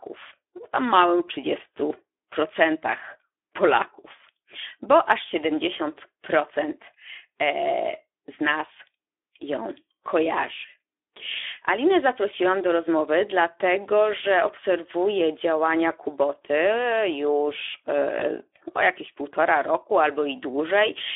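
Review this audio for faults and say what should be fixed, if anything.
The Speex codec, running at a low rate that fits about 11 kbps over a 300 Hz to 3.5 kHz line band, starves its CELP excitation of bits throughout. The speech sounds plainly hoarse and grainy, with nothing above the band edge. Raise the Speex quality setting or move to a wideband codec with more bitrate.

VoIP packet loss concealed by the speech codec occurs from 18.19 to 18.28 s, just before "o jakieś półtora roku". The decoder fills a gap consistent with one lost 20 ms packet by extending its last pitch and filter at falling gain. This gives a brief stretched smear that stays weak for tens of milliseconds as the decoder recovers. Add jitter buffering and forward error correction to reduce packet loss on the link.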